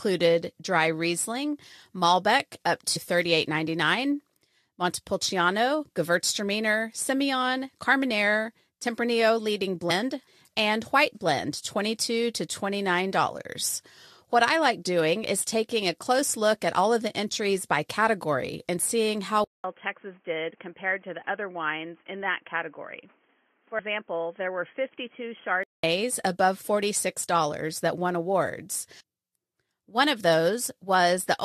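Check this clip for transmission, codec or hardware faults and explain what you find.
Two kinds of fault are present: three short skips where compressed frames are missing, and a stretch where the input appears to move to a poorer device.

Compressed frames skipped at 2.95 s, 9.89 s and 23.78 s. Each time, a run of coded frames never reaches the output, so the audio leaps forward: roughly 150 ms at 2.95 s and 23.78 s, and about 100 ms at 9.89 s. These jumps fit whole frames of about 23 ms each, around seven at a time for the longer skips and four for the shorter one.

Input switched to a poorer device from 19.44 s to 25.83 s, right after "category and seeing how". The likely cause is recording moving to a lower-grade microphone or a headset call profile. The switch brings about 200 ms of silence. Afterwards, nothing above 3.3 kHz remains, so the sound turns dull and boxy. The level drops by about 5 dB, and a new noise floor sits about 35 dB below the signal. 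At 25.83 s the fuller sound returns.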